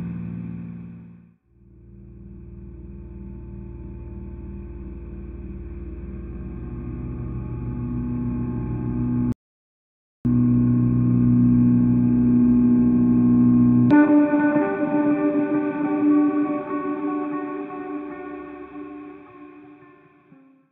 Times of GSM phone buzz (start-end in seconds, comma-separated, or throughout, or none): none